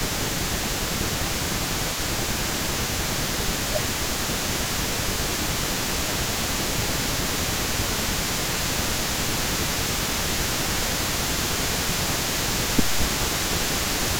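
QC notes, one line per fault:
Throughout: echo leak. A delayed copy of the speech trails the direct sound by about 236 ms, sitting roughly 10 dB below it. This is likely a far end playing the call over a loudspeaker whose echo canceller failed to strip everything its microphone picked up, so the residue of this side's own speech was sent back down the line.
0.00–0.34 s, 1.00–2.53 s, 3.23–5.18 s, 5.72–10.79 s, 11.22–12.18 s, 12.51–13.53 s, 13.96–14.14 s: speech suppressed in double talk. In each stretch the speech dips by up to roughly 10 dB in uneven bursts, and the longest run, from 5.72 s to 10.79 s, has several seconds ducked. The likely cause is both sides talking at once, with the echo canceller unable to tell its talker from loudspeaker echo and attenuating both.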